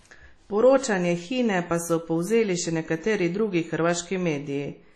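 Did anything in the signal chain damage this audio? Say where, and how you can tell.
Yes: at the codec stage, likely WMA compression near 32 kbps. Long-block quantisation noise makes the speech ring and wash throughout, with breathing hiss and nothing above 13.1 kHz.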